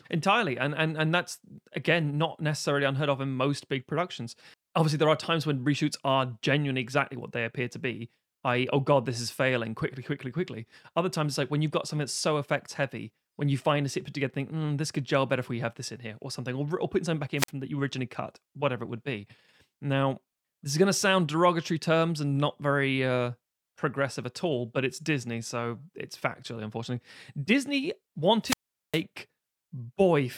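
Wireless microphone squelch dropout occurs twice in this speech. At 17.37 s the radio link from the analogue FM transmitter weakens briefly. Static swells, and the receiver's squelch gates the output shut for about 48 ms before the signal recovers at 17.51 s. A longer fade follows at 28.42 s. Hiss rises, then the squelch holds the output near silent for about 404 ms, and speech resumes at 29.02 s.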